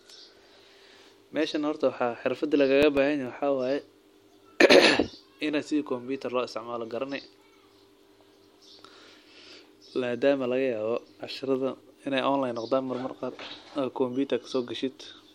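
CD scratch ticks at 2.53 to 3.27 s and 10.96 to 11.55 s. A scratch defeats error correction once per disc turn, leaving tiny evenly spaced clicks, about eight a second, seen as thin vertical spectrogram lines.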